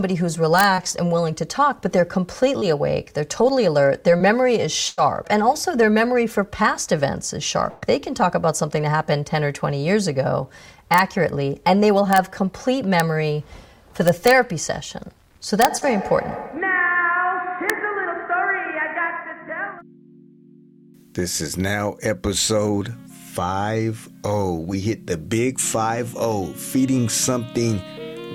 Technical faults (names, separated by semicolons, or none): integer overflow; short concealed packet loss; burst of packet loss